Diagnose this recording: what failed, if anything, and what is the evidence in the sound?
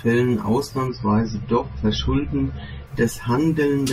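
The failure sits in the network and codec stage: an adaptive stream at a lower bitrate. From 0.87 s to 2.87 s the speech abruptly loses everything above 6 kHz and takes on a thinner, more artefact-laden texture, then snaps back with no gap at either edge. That pattern points to the player switching from a 128 kbit/s MP3 rendition to a 24 kbit/s one while throughput dipped, then recovering.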